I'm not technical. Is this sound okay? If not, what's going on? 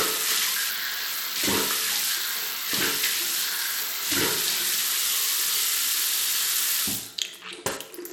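No. The whole clip has a gritty, harsh edge, and the highest treble is missing above about 17 kHz. This is likely Bluetooth SBC compression. The wireless link squeezed the sound hard, so its top end thinned out and roughness crept in.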